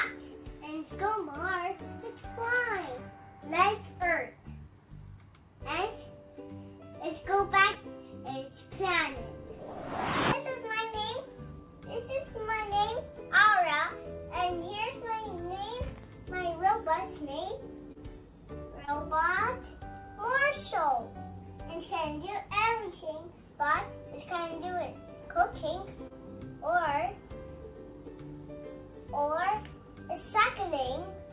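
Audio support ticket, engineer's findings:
Short concealed packet loss at 7.73–7.78, 17.92–17.98, 18.85–18.90 and 26.07–26.13 s. Brief smears where about 30 ms never arrived. Decoder extended the prior sound. Band-limited to 4 kHz, fitting G.711.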